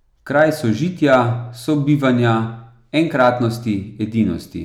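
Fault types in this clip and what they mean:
Hard clipping, at 0.39–0.45 s just before "sožitja sobivanja", 1.13–1.19 s and 2.99–3.29 s: speech peaks overshoot the stage's limit by about 1, 3 and 2 dB and are sliced flat, adding high harmonics heard as brief crackle on those peaks.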